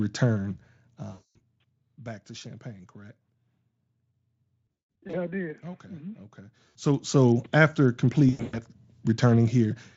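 VoIP packet loss concealed by the speech codec interrupts this Speex-coded speech four times. The first runs from 1.11 to 1.39 s, just before "back to". The second covers 4.67 to 5.17 s, with losses scattered over about 480 ms, ending before "I did". A short one falls at 6.69 to 6.76 s, and the last at 8.29 to 8.6 s. In each gap the decoder extends the last pitch and filter with falling gain, so the sound becomes a buzzy tone or coloured noise that fades. A spectrogram shows flat, smeared harmonic lines, and the waveform shows a repetitive, decaying envelope.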